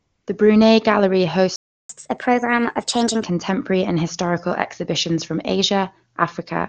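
A speech recording opens with AMR comfort noise from 0 to 0.27 s: for those first 274 ms the phone sent no speech frames, so the receiver generated a smooth, steady synthetic hiss in place of the real background. On a spectrogram it appears as a flat, featureless noise band that ends abruptly when real frames arrive. A playback stall follows from 1.56 to 1.89 s, where the sound cuts out for about 335 ms, most likely because the player ran short of data or its thread was briefly blocked. The waveform drops to a flat line and the spectrogram shows a clean vertical gap before the speech resumes. From 1.89 to 3.23 s there is catch-up at higher speed: the backlog is resampled at 1.25 times normal speed, raising pitch by roughly four semitones, until playback settles back to normal rate. On the spectrogram, harmonics and formants shift upward and syllables look compressed in time for that stretch, then drop back at 3.23 s. 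Throughout, the band limit near 7 kHz fits the AMR wideband (HD Voice) codec at a high rate, with little or no audible coding damage.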